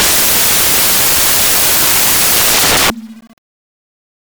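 From start to end, samples are built from the wrong bytes. Each value is assembled misaligned or byte-swapped, so its jittery low bits become its bulk. The result is loud, harsh noise, close to white on loud sounds, whereas added hiss stays level.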